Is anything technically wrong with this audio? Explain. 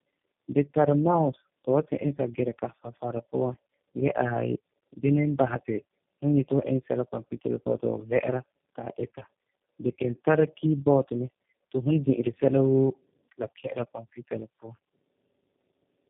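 Yes: throughout, tandem speech coding passes the speech through about three low-rate codecs in a row, compounding roughness, muffling below 3.5 kHz and warble beyond any single codec.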